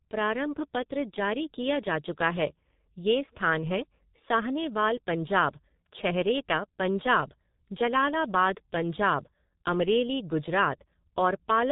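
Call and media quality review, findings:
G.723.1 codec damage, whole clip, heavy. Speech muffled and hoarse, nothing above 3.8 kHz, so consonants smear together. Points to the low-rate ~6 kbit/s mode: 30 ms frames, voice model updated slowly, so fast articulation gets blurred. Probable component: legacy VoIP leg or gateway transcoding to G.723.1. Worth checking codec negotiation on that hop.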